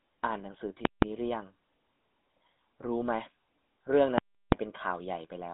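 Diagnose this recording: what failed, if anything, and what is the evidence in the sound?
The codec stage has failed: the whole recording carries GSM full-rate coding damage that is plainly audible. The speech has a buzzy, gravelly roughness because the codec rebuilds the voice from a vocal-tract model driven by a sparse, regularly spaced pulse excitation. The band runs from about 200 Hz to 3.7 kHz, and the spectrogram is empty above 3.8 kHz, which fits a 13 kbps GSM full-rate path.

A second failure sits in processing or sample-format conversion, where invalid numbers were written at full scale. From 0.85 to 1.02 s and again from 4.18 to 4.52 s, a calculation produced infinite or invalid values that became the largest positive or negative value. Each stretch is heard as a very loud pop at its start and end with nothing between. On the waveform, each block is a flat slab pinned at one extreme value, far beyond the speech peaks. 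The durations of about 0.17 s and 0.34 s fit 8192-sample and 16384-sample blocks.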